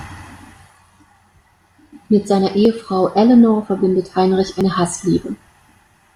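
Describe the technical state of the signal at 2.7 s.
Right around 2.65 s there's a small skip in the speech, audio missing between chunks: roughly 20 ms drops out and the two sides butt straight together with no gap. The likely cause is the recorder losing a sliver while switching between 1-second chunks.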